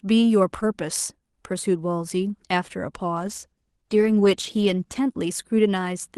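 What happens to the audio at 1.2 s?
Nothing goes wrong at 1.2 s: the speech there is intact, carrying only the ordinary band limit and coding texture of the call path it travelled through.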